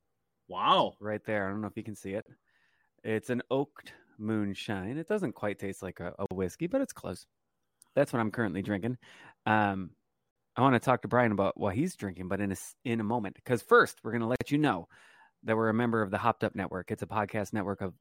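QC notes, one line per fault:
2.22, 6.26, 10.31 and 14.36 s: gap at a join of encoded pieces. The speech drops out for about 40 ms at the first join and 49 ms at the others, every 4.0 s, such as after "taste like a a". The gaps have smeared edges. The pieces were joined untrimmed, keeping each encoder's start delay and last-frame padding.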